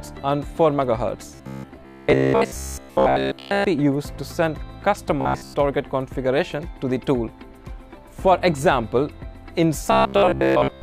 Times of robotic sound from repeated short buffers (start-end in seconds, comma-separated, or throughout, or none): 1.35-3.64, 5.21-5.55, 9.92-10.82